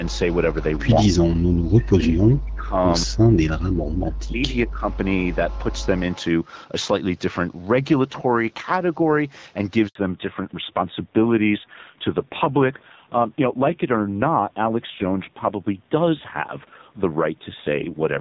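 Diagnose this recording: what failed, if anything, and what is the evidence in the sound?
From 1.04 to 2.75 s and again from 3.05 to 4.87 s the speech repeatedly dips and breaks up, falling by as much as about 40 dB, for about a second and a half in each stretch. This is likely speech suppressed in double talk, at the call-processing stage: the echo canceller could not tell the near talker from loudspeaker echo and attenuated everything. On a waveform the envelope shows deep notches and gaps; a spectrogram shows the harmonics thinning or vanishing in patches.

Two brief faint repeats of the voice appear at 4.93 to 4.98 s and 6.12 to 6.25 s, about 30 dB below the main speech and trailing it by roughly 200 ms (201 and 203 ms). This is likely an echo leak in the far end's call processing, where its echo canceller let residual loudspeaker pickup through and sent it back. A spectrogram would show a weak copy of earlier harmonic patterns offset by 0.2 s; on the waveform it is small beside the main speech.

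At 9.87 s the audio drops out completely for 80 ms, ending at 9.95 s. This is a handover gap at the network stage: the call moved between networks and no speech frames arrived during the switch, so whatever was said in that moment is lost. The waveform shows a short flat line after a quick fade. The spectrogram shows a clean vertical blank band across all frequencies, with nothing to smooth over it.

From 9.95 s to the end the sound becomes duller and rougher, with nothing above 4 kHz. Before the gap, content reaches up into the 6.4 to 7 kHz region. This is a fallback to narrowband at the codec stage. The earlier band fits HD Voice at 12.65 kbit/s. The later sound fits a low-rate narrowband codec around 5.9 kbit/s. A spectrogram shows a hard ceiling at 4 kHz beginning exactly where the gap ends, with coarser, grainier harmonics below it.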